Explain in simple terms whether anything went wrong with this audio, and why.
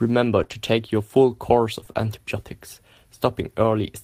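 Lost packets rebuilt from error correction at 0.35 to 0.41 s and 0.50 to 0.56 s: missing pieces were replaced by rough backup copies, so the speech turns briefly grainy and noisy.

Short concealed packet loss at 0.43 to 0.47 s and 0.47 to 0.50 s: tiny chunks never arrived, and the receiver stretched the previous sound over each gap, causing a quick smear or wobble.

Repeated packet loss (robotic sound) from 1.80 to 1.97 s: three gaps close together were each patched by repeating sound, giving a choppy stretch with bits missing.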